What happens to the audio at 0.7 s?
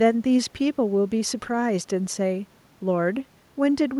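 At 0.7 s the speech continues intact, with only the room's own background noise sitting about 36 dB below it.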